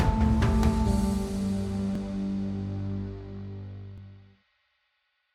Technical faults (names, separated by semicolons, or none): overlapping chunks